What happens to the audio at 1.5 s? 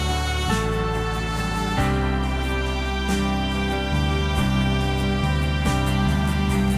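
Nothing goes wrong at 1.5 s; the music plays through that moment intact, with no dropout, click or glitch.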